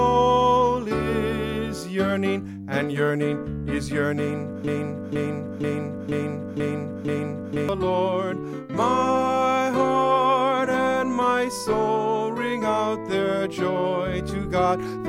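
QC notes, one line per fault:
4.67–7.69 s, broken-record loop: A fragment of about 0.48 s plays six times in a row. The repeats run back to back and sound identical each pass. Together they fill about three seconds. The audio that belonged in that span never plays, so the sound jumps ahead at 7.69 s. The likely cause is a player, encoder or stream that stalled and kept sending the last piece it held. The exact repetition produces the stuck, stuttering effect.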